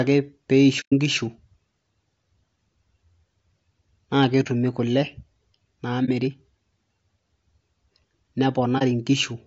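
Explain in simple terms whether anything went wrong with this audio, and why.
Two things went wrong. The whole clip of speech sounds rough and grainy, with a hiss-like fuzz between the tones of the voice and a thin, artificial top end. That's likely low-delay AAC compression, the kind video-call apps use. It chops sound into very short slices to keep lag down, which makes it harder to capture a voice's pitch cleanly, and squeezed this hard it leaves that gritty texture.

There's also AAC frame loss with muting. At 0.80 to 0.93 s the sound fades out into a soft hole for about an eighth of a second. Shorter dropouts of roughly 0.05 s follow at 4.43, 6.05 and 8.78 s. Chunks of audio never arrived, and the decoder filled them with silence. Because the sound fades out and back in instead of cutting off abruptly, you hear gentle gaps.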